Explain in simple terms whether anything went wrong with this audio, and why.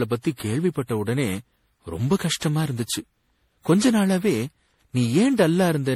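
Yes, something's off: the speech has generation loss from start to finish. It sounds swirly, hollow and smeared, with consonant edges blurred, likely because it was saved as an MP3 around seven times over, each pass stacking fresh damage on the last.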